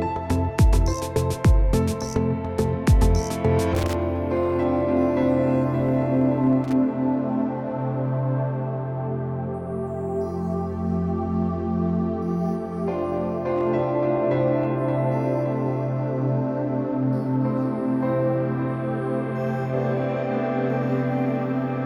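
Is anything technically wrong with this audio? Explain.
Yes. Loose connector crackle appears twice, from 3.75 to 3.94 s and from 6.64 to 6.73 s. A worn or dirty contact repeatedly makes and breaks, chopping the signal and adding pops from any DC present, producing brief irregular bursts of scratchy crackle.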